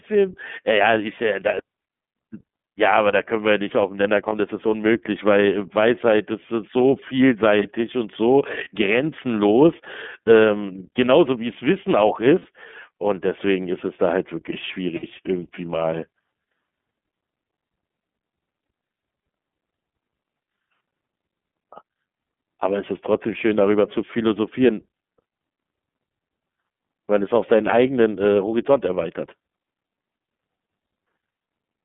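The whole recording passes through the iLBC codec, which squeezes speech into a band of roughly 150 Hz to 3.5 kHz and codes each 30 ms frame on its own. The result is plainly audible: thin, slightly rough and synthetic, which fits the 13.33 kbps mode.

Lost iLBC frames occur at 1.70–1.73 s, 4.28–4.33 s and 8.64–8.67 s, each about 30 ms and consistent with one missing frame. Longer losses of about 60 ms, consistent with two frames, occur at 12.39–12.46 s and 14.97–15.04 s. The decoder fills each gap by repeating the last pitch cycle with added noise, producing a brief buzzy held vowel before clean decoding resumes almost at once.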